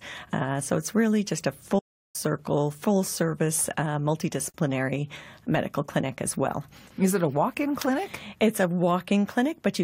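At 1.78 s the sound cuts out in mid-flow and stays silent for about 354 ms, resuming at 2.16 s. This is a playback stall. The break is long enough to hear as a hard hang, not a click, and the audio carries on afterwards. The likely cause is the player running short of buffered data, or its output thread being held up, so nothing reached the output until it recovered.

From 4.51 to 4.54 s a short hole of about 35 ms opens in otherwise continuous sound. Its edges are smeared by the codec, and the audio picks up exactly where it left off. This is a gap at a join of encoded pieces. The material was encoded in separate segments, about 10 s apart, and stitched together without trimming. Each segment's leading encoder delay and the padding on the previous segment's final frame remain as silence.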